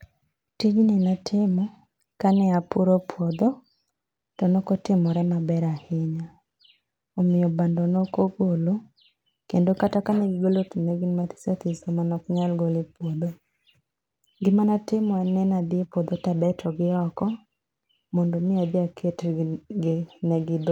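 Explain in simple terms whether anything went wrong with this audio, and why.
Nothing went wrong here.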